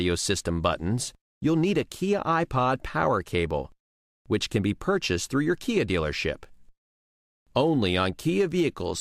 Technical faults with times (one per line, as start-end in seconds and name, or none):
0.12-8.97 clock slip clicks